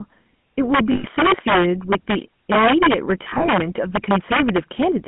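Throughout the speech, the loudest peaks break into violent, snapping cracks far harsher than ordinary clipping. This is integer overflow: the signal was driven about 7 dB past the integer limit, and a few percent of samples wrapped to the opposite sign instead of being held at full scale.

The whole clip also has a buzzy, gravelly roughness and a narrow, boxy band from 150 Hz to 3.4 kHz with nothing above. That is the GSM full-rate codec, consistent with a 13 kbps coder. It describes the voice with a simple vocal-tract model excited by sparse, regularly spaced pulses, and that coarse excitation is plainly audible.

From 0.92 to 1.06 s the sound freezes into a rough, metallic ring for about 120 ms. These are lost GSM frames. Each missing frame was filled by repeating the last good frame's settings, so the held tone rings rather than dropping out cleanly.

Between 3.24 and 3.49 s the same ringing recurs, but broken up. 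About 120 ms of lost GSM frames are scattered across roughly 240 ms in short runs of about 20 ms, and each run brings a brief metallic smear before the speech resumes.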